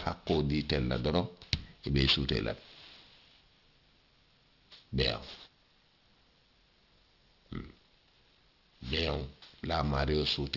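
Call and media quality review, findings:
Aliasing throughout: gritty, metallic sibilants, strong folded content just under the speech, spectrum packed hard to 6 kHz. Points to unfiltered resampling to 12 kHz; a clean lowpass would only dull.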